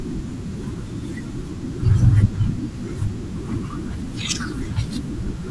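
Nothing in this bit of speech stands out as a fault, so there's nothing here to pick apart.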